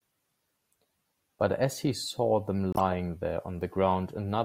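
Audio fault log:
2.73–2.81 s corrupt frame decoded: a loud burst across a few frames, damaged bits misplacing spectral energy; spread over about 86 ms, unlike a single click.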